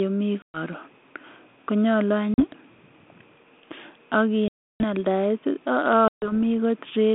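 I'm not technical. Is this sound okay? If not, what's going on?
No. The speech has packet loss on an ADPCM call at 0.42, 2.34, 4.48 and 6.08 seconds. Small chunks of the call went missing in transit and were filled with silence, leaving sudden holes of 120, 40, 320 and 140 milliseconds. This phone system predicts each moment of sound from the last, so after each gap the receiving end briefly loses track and the speech comes back with slight roughness before it settles.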